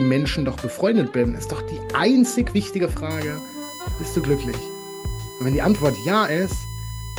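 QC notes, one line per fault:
3.10 s to end, USB whine: a steady, fixed-pitch whine at 1 kHz enters and holds to the close, sitting roughly 20 dB below the sound. It points to current drawn in 1 ms USB frames leaking in through the power or ground wiring and surfacing as a tone.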